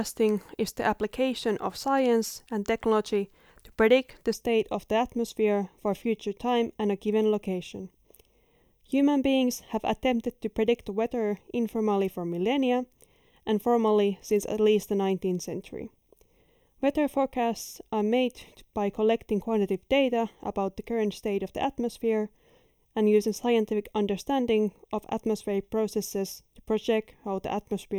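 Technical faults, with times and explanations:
4.33 s to the end: channel delay (comb filtering). From here one channel trails the other by roughly a third of a millisecond, so the mono sum cancels the speech at evenly spaced frequencies, first near 1.5 kHz, leaving it hollow and phasey.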